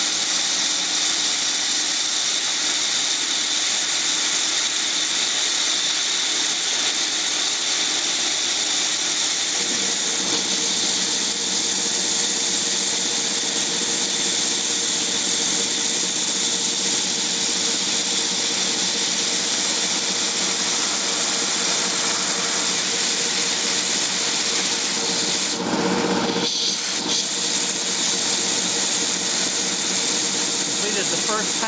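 Throughout the audio the level keeps moving against the sound itself: each loud moment is pulled down, and the quieter stretches and gaps between them come back up, a swing of about 5 dB that makes loud and soft parts sit closer together and leaves the sound squashed. This gain pumping likely comes from the input gain being set far too high for the microphone, with a fast limiter or compressor clamping down on every loud sound and then releasing. Above this, the call path leaves nothing above 8 kHz, consistent with a G.722 wideband call codec at 64 kbps, along with that codec's ordinary coding noise.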